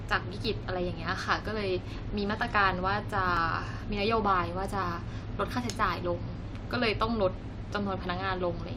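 From about 0.45 s to 7.75 s there's a regular click roughly every 1.46 s under the speech, around seven in all. That's likely clock drift buffer slips: two mismatched clocks, off by around a tenth of a percent, each time dropping or repeating a small block of roughly seventy samples.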